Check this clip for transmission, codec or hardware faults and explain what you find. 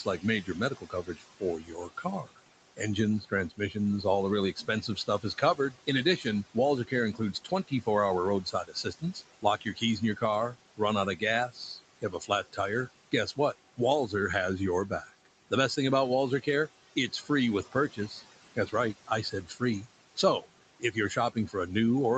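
The clip has two related faults, both from the call's noise suppressor acting on speech over room noise sitting about 15 dB below it.

Noise suppressor artifacts run throughout: the suppressor pulls the steady background down by about 18 dB frame by frame, so the noise dips between phrases and swells under them.

Speech cut by the noise suppressor occurs at 0.04 to 7.87 s, 8.43 to 12.58 s, 13.12 to 14.13 s (just before "has your"), 14.89 to 15.77 s (between "has your" and "thing about"), and 17.12 to 21.69 s. The suppressor mistakes quiet speech for noise and turns it down by up to about 18 dB. Soft consonants and word endings sound swallowed or faint, adding up to a couple of seconds in the first stretch and about a second or less in the shorter ones.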